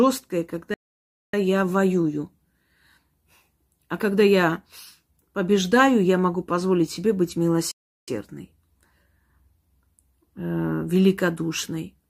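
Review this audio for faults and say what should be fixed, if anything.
The speech cuts to silence mid-flow twice and then carries on: from 0.74 to 1.34 s, about 0.59 s, just before "я воюю", and from 7.71 to 8.08 s, about 0.36 s, right after "могу позволить себе быть". These are playback stalls, likely from the player running out of buffered data or its audio thread being blocked. Giving the output a larger buffer and keeping the audio thread free of blocking work would prevent them.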